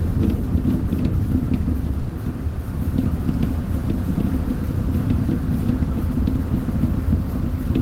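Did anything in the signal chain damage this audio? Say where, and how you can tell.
Yes, a burst of packet loss on the network at 1.99–2.11 s. About 100 ms is concealed by a fading continuation rather than silence, then the sound resumes with roughly 100 ms skipped.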